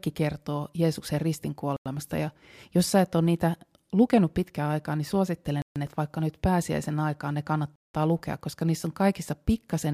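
Speech interrupted three times by a block of digital silence: 1.77–1.86 s (93 ms, which fits a 4096-sample block), 5.62–5.76 s between "lukenut pitkään aikaa niin" and "että vaikka nyt pääsiäisen" (139 ms), and 7.76–7.94 s between "nyt pääsiäisen aikaan ne" and "lukea koska niissä on" (186 ms, fitting 8192 samples). The output buffer was likely not filled in time and was zeroed, so each gap is a flat line on the waveform and a blank vertical band on the spectrogram.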